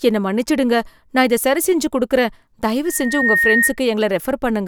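From 2.85 to 3.76 s, loudspeaker feedback squeal: the microphone re-captures its own loudspeaker, and at 1.8 kHz the loop gain tops unity, so a tone swells over under half a second to a few decibels above the speech. A spectrogram shows one brightening horizontal line; the waveform envelope bulges.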